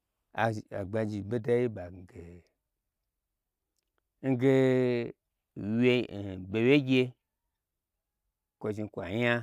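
A speech recording, with nothing technically wrong with it.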